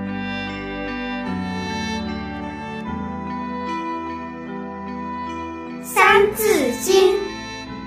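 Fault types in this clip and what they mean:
No technical faults are audible anywhere in the recording.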